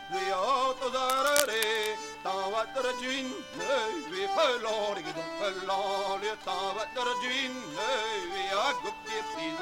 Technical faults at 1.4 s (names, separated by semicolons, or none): cable scratch noise